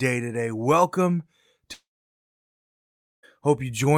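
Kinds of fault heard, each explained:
Long network dropout: The speech stops abruptly at about 1.73 s. A very short trace of the last sound carries on, then nothing but silence holds until about 3.25 s, roughly a second and a half in all. The speech picks up later, with that stretch simply gone rather than delayed. The likely cause is that packets stopped arriving for that long, so the receiver had nothing to play and filled the gap.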